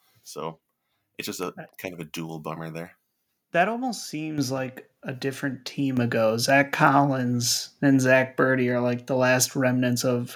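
At 4.38 s and again at 5.97 s, the microphone volume stepped up as the input gain was raised abruptly, lifting speech and background together by about 9 dB, then about 6 dB.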